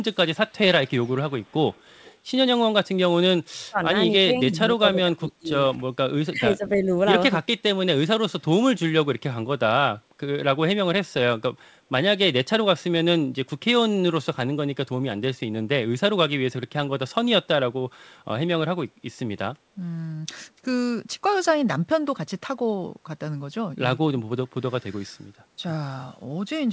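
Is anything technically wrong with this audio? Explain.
Yes, there are two kinds of fault in this speech clip: echo leak and speech suppressed in double talk.

Echo leak, from 0.48 to 0.53 s and again from 0.85 to 2.16 s: the far end is likely on a loudspeaker, with its echo canceller letting part of what its microphone picked up pass back. The result is a faint delayed copy of the speech, trailing by about 0.32 s. It is a brief scrap around 40 dB below the speech at first, then a longer, more noticeable stretch around 30 dB down.

Speech suppressed in double talk, at 3.69 to 3.79 s, 4.23 to 5.5 s and 6.3 to 6.91 s: both sides were talking at once, and the echo canceller likely could not tell the talker from loudspeaker echo, so it pulled everything down. The talker's speech dips sharply, by about 30 dB in the first, very short hole, about 25 dB across roughly 0.7 s in total in the second span, and about 15 dB in the third.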